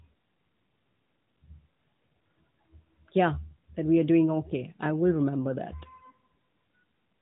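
Nothing stood out as a technical fault on listening to this speech clip.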